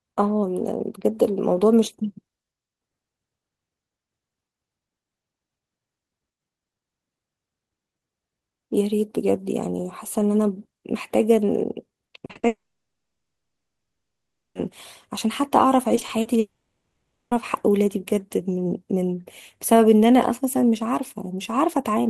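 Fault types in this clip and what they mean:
Repeated packet loss (robotic sound): at 12.05–12.45 s and 15.95–16.27 s, short holes up to 40 ms are patched by repeating sound, giving choppy, robotic fragments.
Long network dropout: at 12.47–14.57 s and 16.39–17.33 s, audio briefly buzzes then falls silent and resumes with material missing, likely from interrupted network delivery.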